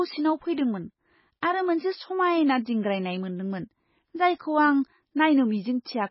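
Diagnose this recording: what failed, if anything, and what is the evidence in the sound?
The codec stage is at fault. The speech is bandwidth-limited and swirly throughout, with nothing above 5.5 kHz. That hard shelf and the watery, chirping sibilants point to heavy damage that is likely MP3 compression at a very low bitrate, around 16 kbps. Starved of bits, the encoder cut the treble at a fixed frequency and dropped weak spectral lines. On a spectrogram this appears as a flat ceiling at 5.5 kHz and isolated blobs that flicker in and out between frames.

Pre-echo appears from 0.53 to 0.58 s, where about 43 ms of hiss precedes a sharp onset, softening and smearing the attack. The transform block containing that onset spread its quantisation noise across its full length, so noise sized for the loud attack also filled the quiet moment before it. A waveform shows a low fuzz rising ahead of the transient, and a spectrogram shows a broadband smear leading the attack's vertical edge.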